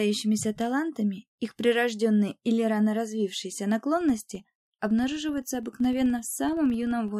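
A filter restarted on every block runs from 3.97 s to 7.17 s. The filter discards its stored state at each block boundary and restarts from silence, so every block opens with a small transient. This produces a 23.4 Hz buzz that follows the sound's level, which fits a 2048-sample block.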